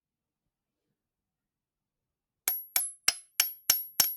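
A speech-tuned noise suppressor was left running over this recording of sounds, and it treats anything steady, such as sustained tones, room ambience and decaying tails, as noise to be pulled down. Onsets get through largely intact, but whatever lingers after them is turned down by roughly 5 dB, so across the whole clip the level pumps and flutters and the tails thin out rather than ringing naturally. From 2.80 to 3.32 s, the likely culprit is a drift correction step, where clock-matching software briefly changed the playback rate in one jump to rebalance its buffer. Over that half second the audio runs 6.2% slow and drops 111 cents, a little more than a semitone, with speed and pitch sagging together, then snaps back to normal tuning at 3.32 s.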